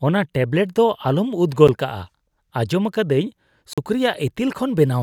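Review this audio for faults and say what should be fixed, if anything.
Two blocks of digital silence break the speech: a tick at 1.68 s, about 11 ms long, and a short hole from 3.73 to 3.78 s, about 43 ms. Each cuts to silence and back with no fade. That hard edge sets it apart from a faded dropout or smoothed-over packet loss. The lengths fit 512- and 2048-sample buffers that were not filled in time. To prevent it, give the audio thread a larger buffer or lighter processing so it never misses its deadline.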